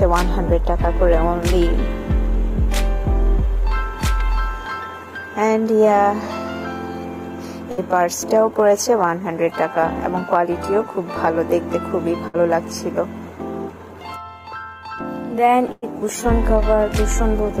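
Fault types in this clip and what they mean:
Burst of packet loss: a run of consecutive packets failed to arrive in time, so the receiver extended the last received sound and faded it down across the gap before playback jumped ahead with that stretch absent. It occurs three times, at about 7.71 s and 12.28 s with roughly 60 ms filled and 60 ms of sound lost each, and at 15.72 s, where about 105 ms is filled and 100 ms lost.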